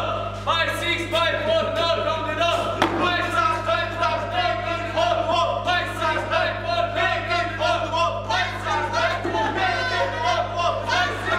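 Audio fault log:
throughout: mains hum, a steady 50 Hz tone coupled in from the power line, only about 10 dB below the sound; a constant bright horizontal line at 50 Hz on a spectrogram.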